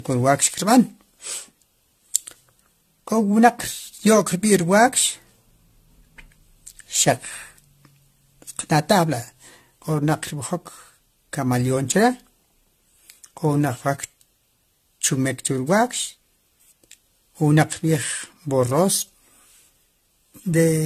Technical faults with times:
0.00-20.85 generation loss

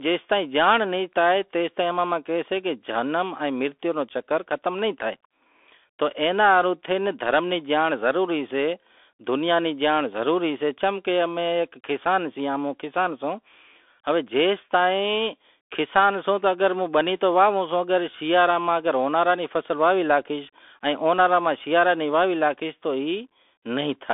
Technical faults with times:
0.00-24.14 Bluetooth CVSD headset codec

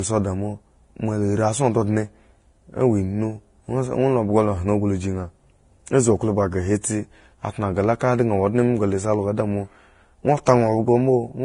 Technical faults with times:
0.00-11.45 transcoding between lossy codecs

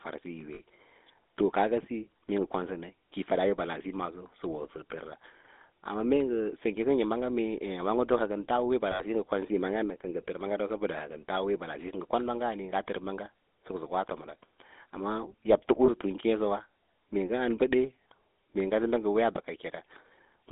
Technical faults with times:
0.00-20.52 GSM full-rate codec
0.54-0.62 lost GSM frames
8.92-9.02 lost GSM frames
15.86-15.89 lost GSM frames

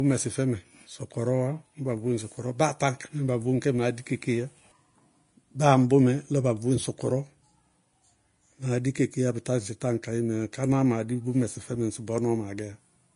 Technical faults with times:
0.00-13.15 Vorbis compression

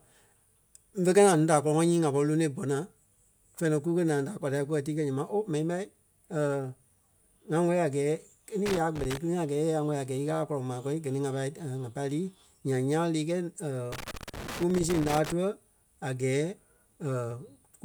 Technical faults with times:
8.66-9.17 loose connector crackle
13.92-15.32 loose connector crackle

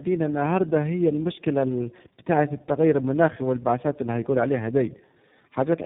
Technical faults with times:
0.00-5.85 tandem speech coding

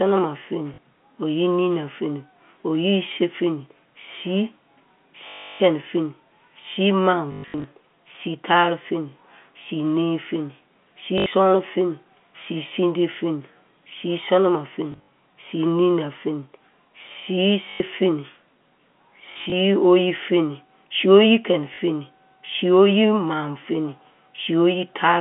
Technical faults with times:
0.74-0.78 packet loss with last packet repeated
5.28-5.60 packet loss with last packet repeated
7.32-7.64 packet loss with last packet repeated
11.18-11.26 packet loss with last packet repeated
14.92-15.08 packet loss with last packet repeated
17.70-17.80 packet loss with last packet repeated
19.32-19.52 packet loss with last packet repeated
21.74-21.78 packet loss with last packet repeated

